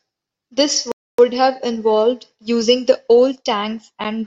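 At 0.92 s the speech stops dead and stays silent until 1.19 s, a rebuffering stall. The player used up its downloaded audio and paused until more arrived, adding about 0.27 s, then resumed at exactly the sample where it halted, so nothing is skipped or repeated. It sounds like a hard freeze. On a waveform this is a flat silent gap; a spectrogram shows a clean dark vertical band with the speech harmonics continuing unbroken on either side.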